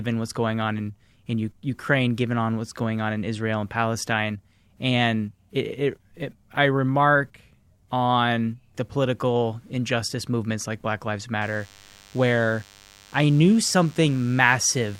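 From 11.42 s to the end, DECT cordless phone buzz sits under the speech. A nearby DECT handset or base is pulsing its radio signal 100 times a second. The audio circuit rectifies those bursts. The result is a thin, steady 100 Hz buzz, rich in harmonics, well below the speech level.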